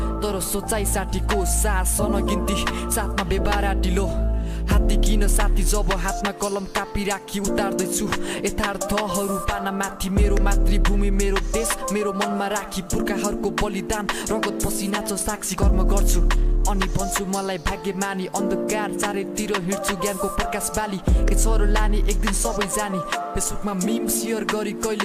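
A fine, grainy hiss rides on the sound from start to finish. It thickens on loud passages and bright, high-frequency content and drops away wherever the audio falls quiet. This is sample clock jitter. The converter's timing wanders by a few microseconds, so each sample lands slightly off its proper instant. Steep parts of the waveform turn that timing slip into an amplitude error, which here sits around 30 dB below the signal itself.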